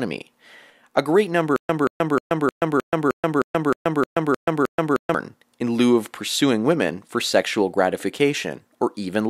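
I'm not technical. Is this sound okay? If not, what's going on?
No. From 1.56 to 5.14 s there is a stutter with silent gaps: the same short burst of speech, about 180 ms long, plays 11 times over, each followed by about 130 ms of dead silence, so it repeats roughly every 0.31 s. The likely cause is the player or stream stalling, replaying its last fragment at each retry and then running empty. Whatever was said during those seconds is lost.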